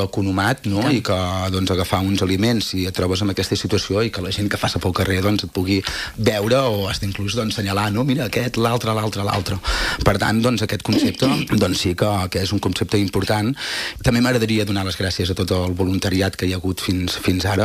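At 12.09 s and again at 17.06 s a single sharp click sounds, likely from dropped samples: a fraction of a millisecond goes missing, so the waveform jumps abruptly. Unlike a dropout, no audible gap follows.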